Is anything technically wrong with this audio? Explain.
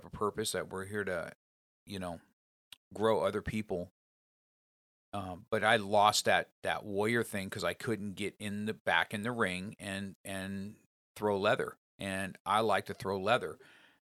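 No, there is nothing technically wrong with this speech recording; the signal stays intact and steady throughout, with no audible faults at any point.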